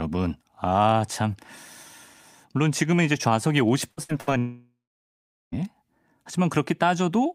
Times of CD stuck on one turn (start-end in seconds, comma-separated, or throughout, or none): none